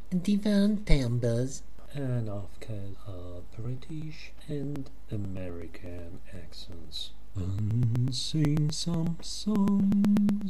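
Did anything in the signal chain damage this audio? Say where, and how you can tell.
Yes. From 3.40 s to 10.41 s there are periodic USB or driver dropouts at the driver or buffer stage. Around fifty regular ticks recur every 0.123 s, roughly eight per second. Each time, a couple of milliseconds of audio is skipped rather than filled with silence, so the waveform jumps and clicks. Packet loss on a network would be irregular and longer, with concealment smearing. This strict clock-like spacing points to a task stalling the bus or driver at a fixed interval.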